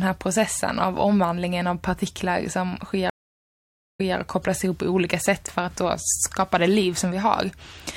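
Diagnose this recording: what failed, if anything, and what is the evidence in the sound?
Network stage: a stream reconnect. After "av partiklar som sker" the speech cuts to silence at 3.10 s for 0.88 s. It resumes at 4.16 s with "och kopplas ihop på", repeating 0.18 s. The link dropped, and a new decoder restarted from resent data.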